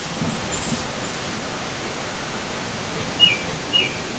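A loudspeaker on the far end of the call was likely feeding its own microphone, with the echo canceller letting that pickup through and sending it back: an echo leak. From 0.18 s to the end, a second copy of the speech trails the first by 515 ms, at roughly the same loudness, so the two overlap and smear each other. Both copies share the call path's 8 kHz ceiling.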